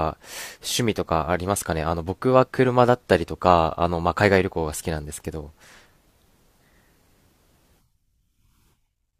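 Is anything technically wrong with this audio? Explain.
No, nothing technically wrong can be heard in this speech recording.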